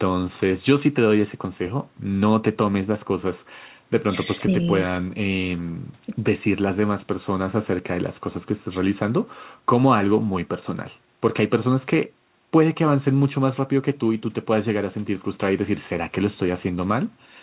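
There are no technical faults to describe in this speech clip.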